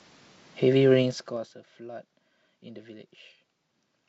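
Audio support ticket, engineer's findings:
Zipper noise, 1.02–1.54 s: audible ticking on the speech during a level drop of around 20 dB. Gain stage applying 4 dB steps, about ten a second, unsmoothed, each step a click.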